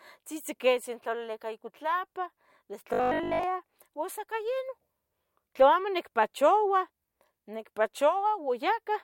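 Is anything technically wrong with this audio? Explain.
Yes. From 2.93 to 3.43 s, just before "ua sa", the speech takes on a robotic sound from repeated short buffers. The voice becomes a rigid, metallic buzz at 50 Hz that still loosely tracks the speech. The likely cause is audio arriving too slowly. The playback side fills the gaps by looping the last chunk, which fits a segment of about 20 ms. For most of that half second, real audio is skipped and replaced by these repeats. The loop rate then imposes the fixed buzz pitch.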